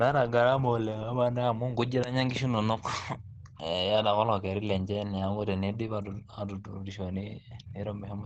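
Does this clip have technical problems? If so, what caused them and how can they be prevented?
Yes. All the way through, the speech sounds muffled and hoarse, with nothing above about 8.6 kHz. That's likely Opus compression running in its speech (SILK) mode, which fits a low bitrate around 16 kbps squeezing the detail out. To prevent it, encode at a higher Opus bitrate so the encoder keeps the full bandwidth.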